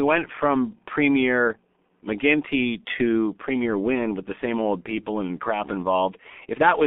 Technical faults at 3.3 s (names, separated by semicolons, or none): G.723.1 codec